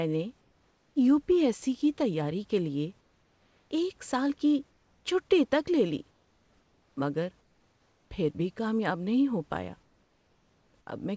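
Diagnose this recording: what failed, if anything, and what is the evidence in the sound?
In the pauses at 0.41–0.96, 3.01–3.71, 4.71–5.05, 6.11–6.97, 7.41–8.11 and 9.83–10.87 s, the room background turns into a flat, featureless hiss about 2 to 4 dB quieter. This is comfort noise in place of the background, likely from discontinuous transmission in call processing: the sender goes silent and the receiver synthesises noise.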